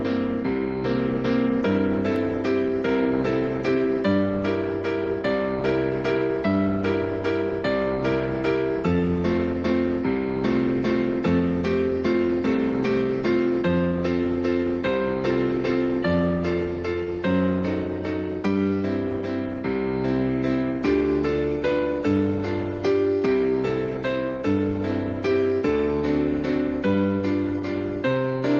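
Nothing stood out on listening, with the sound coming across as expected for a call carried over Opus, its top end stopping at about 12 kHz.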